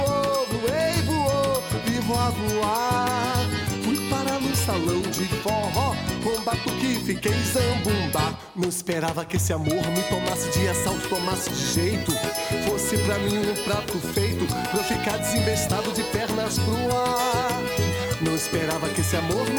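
From 10.33 s to the end, the sound turns grainy and noisy. The grit follows the waveform rather than sitting on top of it as steady hiss. Quiet gaps also fill with a low, rough noise that tracks the signal's sign. This points to a stuck bit, likely one data line held at a fixed value. About half the samples are shifted by that bit's weight, a step of roughly -45 dBFS. The error is small but constant.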